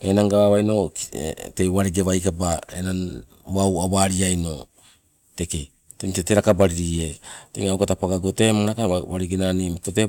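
No technical faults are audible.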